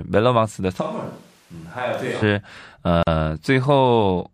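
A speech recording. From 0.82 to 2.21 s the signal likely comes from a switch to a distant microphone: the speech turns roomy and thin, roughly 10 dB quieter, with room noise about 30 dB below it. A gap at a join of encoded pieces, which fits separately encoded 4 s segments left untrimmed, cuts a 41 ms silence into the speech from 3.03 to 3.07 s before it resumes.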